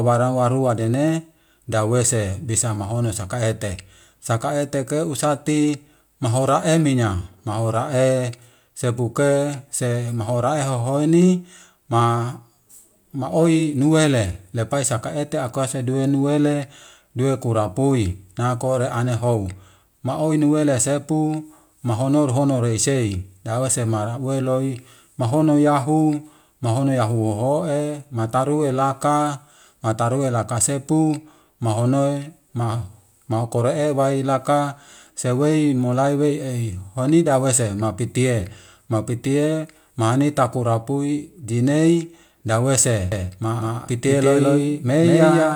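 From 43.12 s to the end, the speech is doubled by an equally loud copy about a fifth of a second behind: a doubled audio track, likely from a second capture path.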